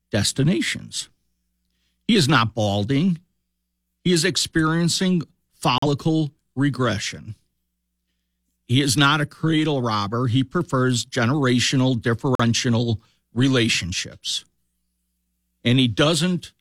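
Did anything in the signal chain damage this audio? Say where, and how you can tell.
Yes. A digital broadcast dropout at the reception stage: the receiver lost or rejected a corrupted frame and muted. The speech cuts to silence from 5.78 to 5.86 s after "is experiencing" and from 12.35 to 12.43 s after "prefers generational". Each gap fits one missing 42.7 ms frame.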